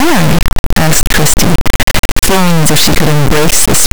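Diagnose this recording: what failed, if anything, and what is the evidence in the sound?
Sample-format conversion failed: 32-bit integer speech was read as 32-bit float, an integer read as float error. It gives a loud buzzing square wave throughout, dropping to silence in quiet passages.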